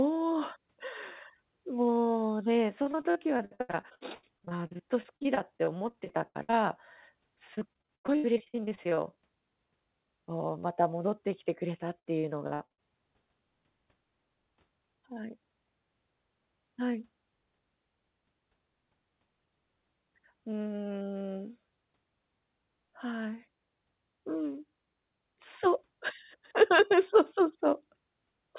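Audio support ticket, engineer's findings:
Repeated packet loss (robotic sound), 2.82–6.55 s, 7.55–8.99 s, 11.99–12.80 s. Jitter buffer/network: recurring dropouts, gaps up to 92 ms, concealed by extending prior audio. About 29–41% of each stretch synthesized; choppy result. Band-limited to 4 kHz, consistent with G.711 narrowband.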